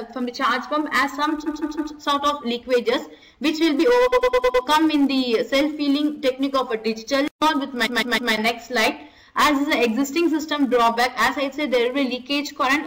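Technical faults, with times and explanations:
1.45 to 1.92 s, 4.12 to 4.64 s and 7.85 to 8.32 s, repeated frames: the audio stutters, replaying a short stretch several times in a row. A 157 ms block plays three extra times at 1.45 s and at 7.85 s, and a 105 ms block plays five extra times at 4.12 s. These fit runs of compressed frames that were sent or stored more than once, so the decoder played them again. Together they add about 1.46 s to the clip.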